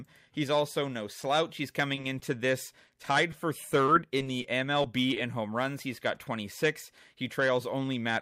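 At 1.21 to 1.25 s, just after "also no", there is a short concealed packet loss. About 20 ms of speech never arrived. The receiver filled it by extending the preceding sound, then blended back. It is heard as a brief smear.

At 1.95 to 1.99 s comes a short stall from a late packet. The jitter buffer ran dry, so the last sound was held for about 20 ms until the packet turned up. Nothing is lost. A sound simply lingers slightly too long.

A second short concealed packet loss follows at 2.01 to 2.05 s. Again about 20 ms went missing and was patched with continued sound. Coming right after the stall, it adds a small wobble.

From 2.87 to 5.18 s, ending just before "in home runs", there are scattered short gaps. About seven small holes appear, each roughly 20 ms or less, with about 120 ms missing in total. Each was patched, leaving brief ticks and hiccups.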